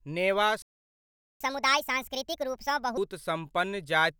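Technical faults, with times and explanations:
0.62 to 1.41 s, playback stall: The speech cuts out mid-flow and the output goes silent for about 0.78 s. It then resumes where it stopped. The likely cause is a player that ran short of data or had its thread blocked.
1.41 to 2.97 s, catch-up at higher speed: Right after the gap, the speech runs at 1.5 times normal speed. Pitch rises by roughly seven semitones, because the backlog is resampled faster to recover lost time. Then both drop back to normal.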